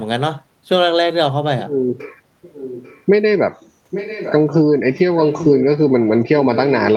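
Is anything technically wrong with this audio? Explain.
Yes. An echo leak appears at 2.42 to 3.03 s, 3.90 to 4.33 s and 5.22 to 5.63 s: a quieter delayed copy of the speech trailing it by about 0.84 s, well below the main level in the first instance and somewhat louder in the later two. The likely cause is a far end on loudspeaker whose echo canceller failed to strip what its microphone caught, so the returned speech is heard again behind itself.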